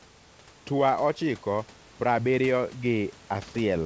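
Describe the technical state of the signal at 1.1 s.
At 1.1 s the speech is intact, with no dropout, clipping or other fault in the signal.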